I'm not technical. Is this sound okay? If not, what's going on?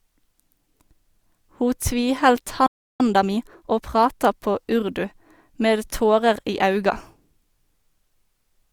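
No. At 2.66 s the speech cuts out and stays silent until 3.00 s, a gap of about a third of a second. That is a playback stall: the player stopped producing sound for a moment, most likely because it ran short of incoming data or was briefly held up by something else on the device, and it resumed once it could feed audio to the speakers again.

From 3.00 s to 4.32 s the speech sounds rushed, running about 1.25 times normal speed, before settling just ahead of "på urdu". This is time-compressed catch-up. Having fallen behind during the pause, the player makes up lost time by trimming tiny slices out of the audio and blending the joins. The pitch stays normal, so it doesn't sound squeaky, but the talking is hurried.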